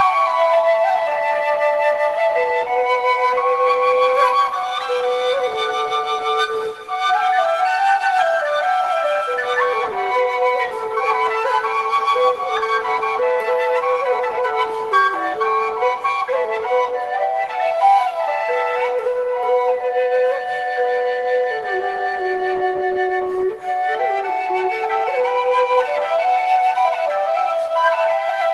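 Nothing stood out on listening to this recording.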